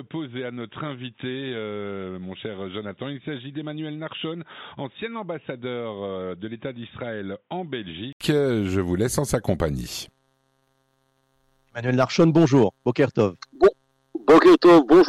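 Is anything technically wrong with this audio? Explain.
Yes. Up to 8.21 s the sound is dull and boxy, with nothing above 3.8 kHz, roughly 10 dB quieter and carrying a faint extra hiss. Then there's an 80 ms gap and it opens up. Most likely the input switched to a poorer device with a narrower band.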